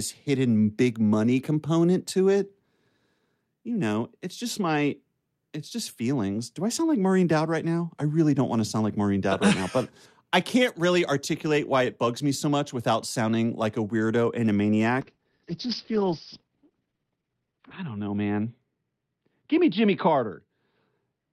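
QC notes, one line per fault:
15.04 s to end, call bitrate drop: right after "a weirdo and a" the speech turns rough and muffled, which fits the encoder being pushed from about 64 kbps down to about 8 kbps as the bandwidth estimate fell. The codec quantises coarsely and narrows the audio band from 20 kHz to 4 kHz, so sibilance and air disappear. The roughest stretch lasts about 2.7 s. On a spectrogram, energy above 4 kHz cuts off along a flat horizontal edge, with smeared, blocky harmonics beneath it.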